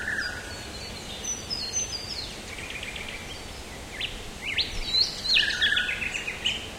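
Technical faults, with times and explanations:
Nothing here stands out as a technical fault; the sounds come through just as they should.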